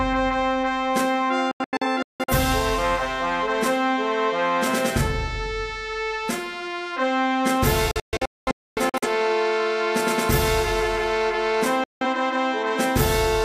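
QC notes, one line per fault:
1.51–2.33 s, 7.91–9.08 s, 11.84–12.06 s: digital broadcast dropout. Failed frames make the receiver mute with a 3 ms fade, leaving silent holes (longest 0.17 s, 0.26 s; the last a single 0.17 s gap). The waveform drops to silence, and the spectrogram shows blank vertical bands.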